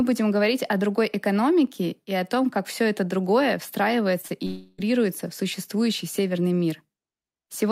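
At 4.21 and 4.28 s, two short concealed packet losses each replace about 20 ms with extrapolated sound, heard as brief smears; the spectrogram shows blurred, smoothed harmonics there. From 4.46 to 4.80 s, a likely long network dropout leaves the last sound continued as a fading buzz or hiss for about 320 ms, drawn as flat, decaying bands with no gap to silence.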